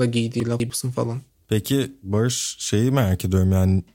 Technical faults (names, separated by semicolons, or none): chunks out of order